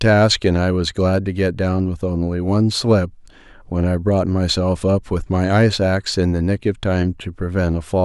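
No technical faults are audible anywhere in the speech recording.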